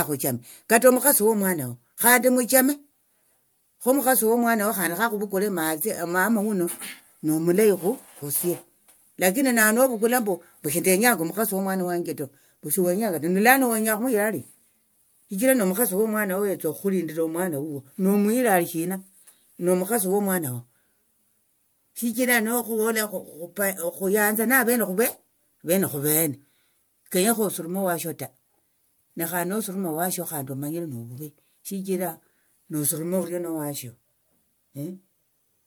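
From start to finish the speech has a swirly, smeared and hollow quality, with consonant attacks blurred and soft, more degraded than a single pass of its codec would produce. The likely cause is generation loss: the audio appears to have been decoded and re-encoded around four times with MP3, each pass quantising on a shifted frame grid so that noise and spectral holes stack up. The character fits a 128 kbit/s chain, and the spectrum stops at about 20.1 kHz.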